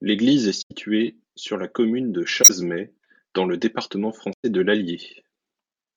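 Speech with three instances of a corrupt frame concealed: 0.61–0.72 s, 2.42–2.51 s just after "sur la commune de", and 4.33–4.45 s after "dans le département". Each spans about 0.09–0.12 s, consistent with four or five damaged AAC frames that the decoder detected and papered over. Unlike a raw bit error, there is no squeak or burst.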